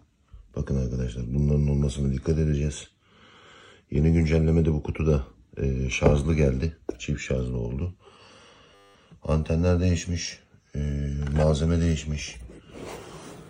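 From 8.75 to 8.95 s the sound turns into a steady buzz, the signature of a system hang loop. The computer or its audio driver stalled while the output hardware kept replaying the same 10 ms stretch of its ring buffer, twenty times over, giving a 100 Hz tone. About a fifth of a second of audio is lost. Unlike a dropout, which leaves silence, or a glitchy stutter with uneven repeats, this loops one identical slice exactly.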